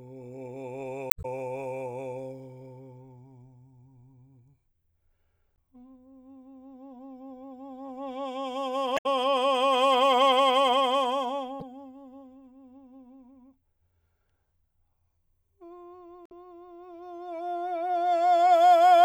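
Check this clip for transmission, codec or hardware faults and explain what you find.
The music has one recurring codec fault, heard five times.

Damaged data in a compressed stream occurs at 1.09 to 1.25 s, 5.55 to 5.58 s, 8.94 to 9.06 s, 11.58 to 11.62 s and 16.26 to 16.32 s. Corrupted bytes in the encoded stream make the decoder misread frames and lose sync until it finds the next valid frame header. Each event is a brief chirp, squawk, click or short hole lasting between roughly 35 and 170 ms.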